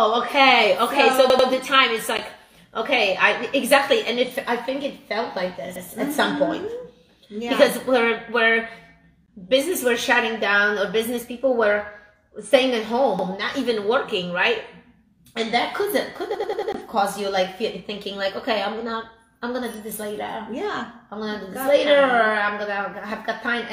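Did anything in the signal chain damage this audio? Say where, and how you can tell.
Yes, there's a repeated buffer at the driver/buffer stage. A chunk of about 93 ms stutters with hard joins at 1.3 s (played twice more), 5.76 s, 13.19 s and 16.35 s (four extra plays, to 16.72 s). That fits a 4096-sample buffer being replayed whenever fresh data arrived late.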